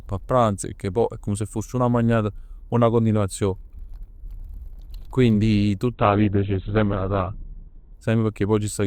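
At 5.93 s the speech abruptly loses its top end. This is an adaptive stream at a lower bitrate. The connection slowed, so the player switched to a cheaper encoding of the same audio. Nothing remains above 4.2 kHz, which fits a drop from a rate near 64 kbit/s to one near 12 kbit/s. Sibilants go dull and codec artefacts rise. There is no gap. At 7.93 s full quality returns just as suddenly.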